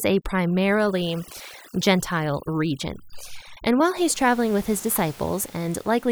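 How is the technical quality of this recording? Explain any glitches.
The recording has one processing fault. From 0.0 to 3.97 s, overdone noise removal switches off frequency bands near its noise estimate, breaking the background into twinkling, warbling specks. After 3.97 s, the room noise, about 23 dB below the speech, stays intact and does not warble.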